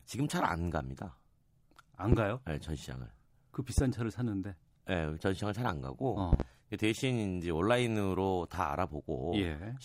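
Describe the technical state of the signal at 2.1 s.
A loud pop sits on the speech from 2.12 to 2.16 s: a single sharp thump, about 20 dB above the signal, with the speech continuing underneath. It is likely a voltage step or pulse, such as from a plug, switch or static discharge, entering the signal chain. The waveform shows one tall spike, and the spectrogram shows a thin vertical broadband stripe.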